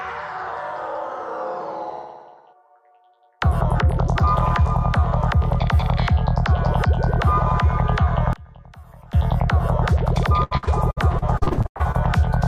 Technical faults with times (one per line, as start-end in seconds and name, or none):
8.33-9.13 one channel inverted
10.43-11.96 repeated packet loss (robotic sound)